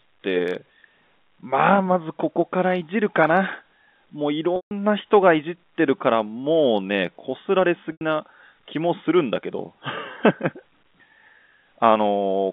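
At 4.56 s the audio breaks into a short held buzz, then fades to silence until 4.71 s. That is packet loss with pitch repetition. About 150 ms of audio went missing, which fits five lost 30 ms packets. The receiver filled the hole by looping the last pitch period and fading it out. At 7.92 s it happens again, lasting 90 ms, to 8.01 s, which fits three lost packets. Both gaps sit within the narrow telephone band of the G.711 line.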